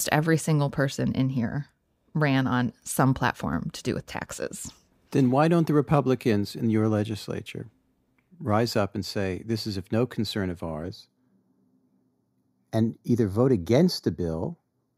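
From 10.88 s, after "of no concern of", channel delay (comb filtering) sets in: a delay of about 0.2 ms cancels frequencies from around 3 kHz, leaving hollow speech and fixed notch bands on a spectrogram.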